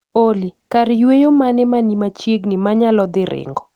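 A speech recording with no audible technical faults.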